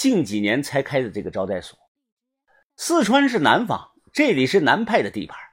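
No technical faults can be heard anywhere in the speech. There is nothing to place at any point in time and no cause to trace.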